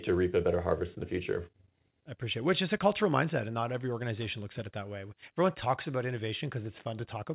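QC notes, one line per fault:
No faults found; the speech comes over the WebRTC call path with a band limit at 4 kHz, consistent with G.711 mu-law telephone coding.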